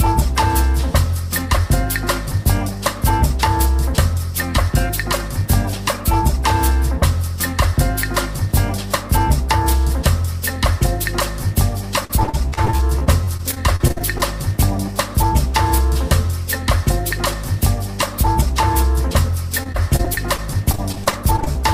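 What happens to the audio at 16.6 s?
Nothing goes wrong at 16.6 s; the audio carries on intact through that moment, with no dropout, click or distortion.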